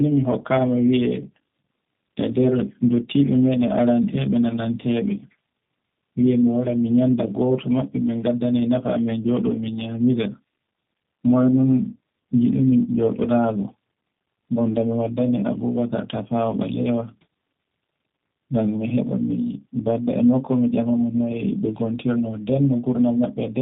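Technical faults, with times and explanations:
Throughout, tandem speech coding: the speech went through AMR-NB at 12.2 kbit/s, then G.711, then was squeezed again by G.729A at 8 kbit/s. Two speech coders stacked up, the second working on the first's leftovers, so it's rough and warbly, with nothing above about 3.8 kHz.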